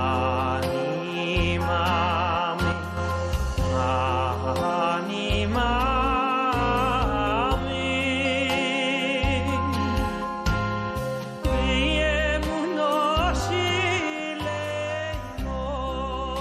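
The audio's level drops abruptly by about 6 dB from 2.72 to 2.97 s and from 14.10 s to the end; the likely cause is that one channel drops out.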